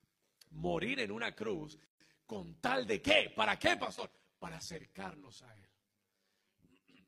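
From the start, the speech carries a metallic buzz, the level pumping by about 11 dB around a hundred times a second. This is overlap-add ripple: the audio was split into windowed frames and rebuilt with an overlap that doesn't add back to a constant gain, so the level dips and peaks once per frame.

At 1.86 s, right after "morir en una cruz", the sound drops out for about 146 ms with smeared edges, then resumes at "con tal de qué". This is a gap at a join of encoded pieces: separately encoded segments were spliced without trimming the encoder's leading delay and last-frame padding.

From 3.85 s to the end, the voice turns hollow and phasey, with fixed notches starting around 50 Hz. This is channel delay with comb filtering. One channel lags the other by roughly 10 ms, and summing them to mono cancels shared content at evenly spaced frequencies.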